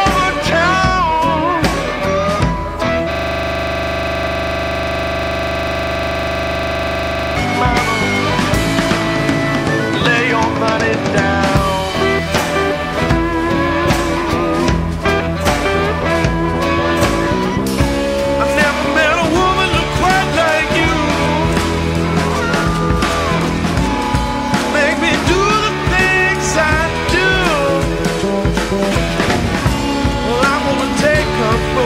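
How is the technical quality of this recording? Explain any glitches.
The recording has one glitch: a system hang loop from 3.11 s to 7.36 s. The playback path froze, but the audio hardware kept replaying the same ring buffer. A 40 ms slice of audio repeats exactly, over a hundred times. At that length it loops 25 times per second. The result is a rough, mechanical stutter bordering on a buzz, with no forward movement in the sound until the system recovers at 7.36 s.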